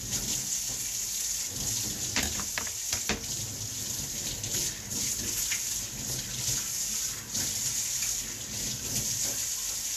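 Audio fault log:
Throughout: Vorbis compression, likely the cause of a plainly audible hissy, grainy texture across the whole sound, with roughened tones and softened attacks. The treble has been quantised so coarsely that fine detail is replaced by noise of similar energy, and nothing survives above 14.2 kHz. The damage level fits a low bitrate in the region of 37 kbps. On a spectrogram the energy ends at a hard ceiling near 14.2 kHz, the upper band looks speckled and blotchy, and transients appear smeared in the waveform.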